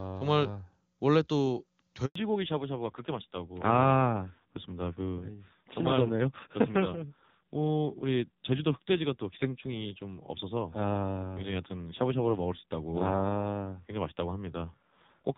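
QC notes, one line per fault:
2.05–2.15 s, handover gap: The speech cuts out for 100 ms and fades to silence within a few tens of milliseconds. The call was passing between networks, and no speech frames arrived during the switch. Whatever was said in that window is lost.
2.15 s to end, fallback to narrowband: Right after the gap, the speech loses everything above 4 kHz and turns duller and rougher than the clear HD Voice opening. The call dropped to an older narrowband codec. The raspy texture fits a low rate near 5.9 kbit/s.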